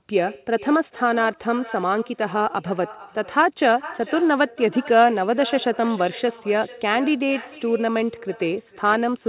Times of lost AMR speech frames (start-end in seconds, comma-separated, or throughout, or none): none